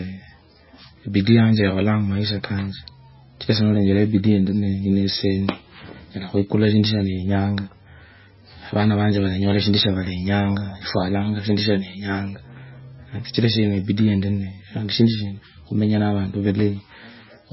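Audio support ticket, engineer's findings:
MP3 compression, throughout the speech. Nothing above 5.6 kHz, heavy watery swirl, smeared onsets. Likely a bit-starved MP3 encoder, consistent with roughly 16 kbps, dropping weak spectral lines frame to frame.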